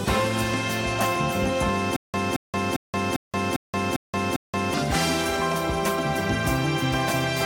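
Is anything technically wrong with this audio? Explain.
Yes. From 1.96 s to 4.74 s there is a stutter with silent gaps. The likely cause is a stalled player or stream: each time it retried, it replayed the last fragment it still held, 224 ms of audio, and then ran dry. The same burst is heard seven times at a steady 400 ms pace, each time followed by 176 ms of digital silence. The audio that belonged in that stretch is lost.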